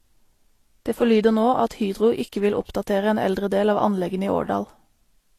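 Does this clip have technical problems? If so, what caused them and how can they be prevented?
Yes. Throughout, layered coding artefacts and nothing above 15 kHz point to transcoding between lossy codecs, likely low-bitrate Vorbis re-encoded as HE-AAC, each adding artefacts. Prevent this by encoding only once, directly from the original uncompressed source.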